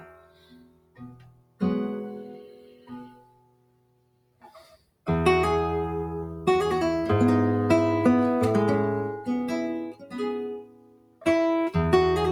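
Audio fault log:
Throughout: noise suppressor applied to music or sounds. A suppressor built for speech treats steady and sustained parts of this audio as noise, so the level swings by around 20 dB as it clamps down and releases. Attacks mostly pass while held and decaying parts sink, leaving the sound to pump, flutter or thin out. Unlike a compressor, the swings follow how steady the sound is rather than how loud, and quiet sudden sounds survive.
0.00–1.61 s, 2.41–5.06 s, 9.85–10.20 s, 10.51–11.26 s: sound cut by the noise suppressor. In these stretches the suppressor judged the sound to be noise and pulled it down further than elsewhere, by as much as about 17 dB, roughly five and a half seconds in all. Sustained and fading material drops or has its tail shortened while onsets still come through. That separates it from a dropout, where everything vanishes together, attacks included.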